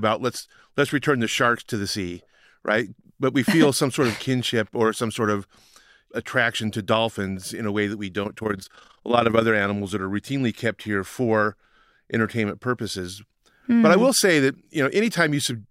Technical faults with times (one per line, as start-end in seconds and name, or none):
8.24-9.44 overlap-add ripple